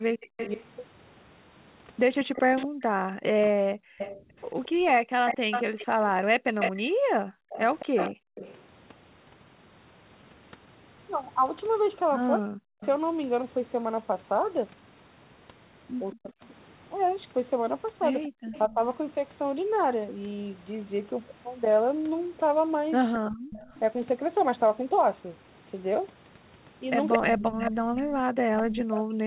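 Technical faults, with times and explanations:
0.09–8.35 s, 18.28–18.39 s and 23.19–23.5 s: background gated by the echo canceller. The room tone drops out while far-end audio plays through the loudspeaker. In the first stretch, the dips add up to about 3 s, and the other two are brief dropouts. The level falls by as much as about 40 dB and then recovers. The canceller is treating the microphone signal as echo and pulling its gain down hard, so the ambience vanishes and comes back when it lets go.
0.2–8.62 s, 12.81–12.86 s, 16.13–18.62 s, 23.14–23.79 s and 27.12–27.99 s: echo leak. A delayed copy of the speech trails the original by 224 ms. It is strong in the first and last stretches, at about 5 dB below the speech. Elsewhere it is weaker, at about 15 to 20 dB below. Within the 4 kHz band of the G.711 path, this is likely residual loudspeaker pickup that the echo canceller failed to subtract, which was then sent back to the talker.
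2.66–3.98 s, 12.36–12.82 s, 16.15–18.79 s and 27.17 s to the end: speech suppressed in double talk. The near-end voice dips by roughly 40 dB or cuts out in pieces while the other side is talking. The affected portion is roughly a second in the first stretch and only a few tenths of a second in the second and third. This is likely the canceller failing to tell the local talker from loudspeaker echo during overlap, so it attenuates both.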